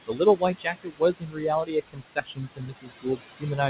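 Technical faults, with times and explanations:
Throughout, noise suppressor artifacts: the suppressor treats the room's steady background, sitting only about 9 dB below the speech, as noise and pulls those bands down by about 17 dB frame by frame. Between phrases the background sinks away, then swells back under the speech. The voice is already narrowed by a call codec that passes nothing above 4 kHz, consistent with G.711 A-law at 64 kbps.
0.07–1.45 s and 1.63–3.69 s, speech cut by the noise suppressor: in both stretches the suppressor mistakes parts of the speech itself for background and attenuates them along with the noise, by as much as about 22 dB in the first stretch and about 21 dB in the second. Roughly a second of the first stretch is affected in all. Soft consonants, word endings and quieter passages come out swallowed or faint, as if partly gated away.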